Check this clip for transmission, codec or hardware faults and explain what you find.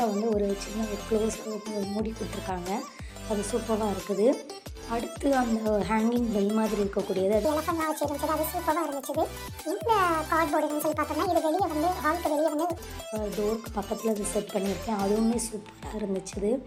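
One fault is present. From 7.45 to 12.78 s there is a wrong sample rate: samples are clocked out faster than they were captured, with no conversion. Everything runs 1.5 times fast and about 7 semitones high, which fits 32 kHz material played at 48 kHz.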